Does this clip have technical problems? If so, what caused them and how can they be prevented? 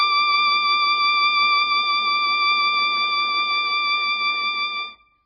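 Yes. Throughout the music, nothing comes through above 5 kHz, and what remains sounds heavily watery and swirly, with smeared attacks. The likely cause is MP3 compression at a very low bitrate, around 16 kbps. Short of bits, the encoder cut the treble at a fixed point and dropped weak frequency lines that flicker between frames. A plain low-pass filter would dull the top without that shifting, bubbling texture. Encoding at a much higher bitrate would prevent it.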